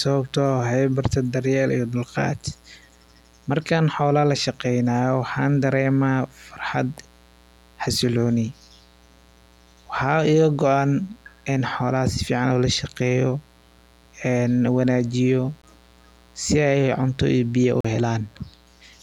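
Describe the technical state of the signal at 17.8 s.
At 17.80 s the speech cuts off and leaves a silent hole of about 40 ms, ending at 17.85 s. It then resumes further along, as if it had kept playing. This is a Bluetooth dropout, likely caused by audio packets reaching the headphones too late and being discarded. The gap fits roughly three lost packets.

Underneath, a steady, raspy mains buzz runs on at about 35 dB below the speech. Sharp switching spikes, twice in every 60 Hz cycle, leak in through a dimmer, rectifier or missing shield and spread harmonics of 60 Hz up into the kilohertz range.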